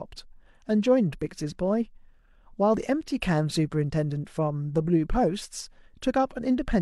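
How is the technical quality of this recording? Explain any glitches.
There is one glitch in the speech: a brief skip at about 2.74 to 2.78 s. This is an overlap between stream segments. Two roughly 6 s segments claimed the same time span, so the player discarded about 37 ms of sound that was never actually duplicated, leaving a sudden jump in the waveform.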